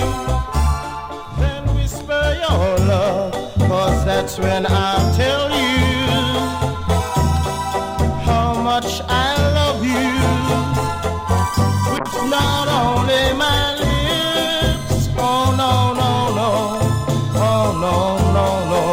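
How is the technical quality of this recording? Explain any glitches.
One glitch stands out: a call bitrate drop from 11.99 to 15.11 s. The call's bandwidth estimate collapsed, forcing the Opus encoder into far fewer bits, which fits a fall from about 64 kbps to around 13 kbps. For about 1.3 s at the bottom the sound turns rough and muffled as high frequencies vanish and coarse coding smears detail. On a spectrogram the upper bands cut off and return when the bitrate recovers; the waveform envelope changes little.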